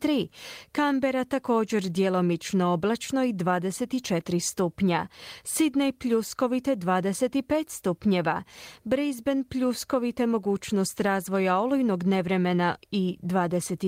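The recording contains no audible technical faults.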